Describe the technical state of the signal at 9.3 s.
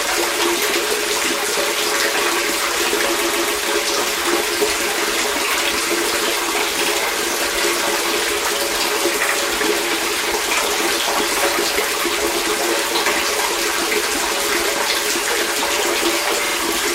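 Repeated frames from 9.28 to 9.35 s: a 72 ms block of compressed data was decoded twice, so the audio stutters briefly and runs 72 ms longer.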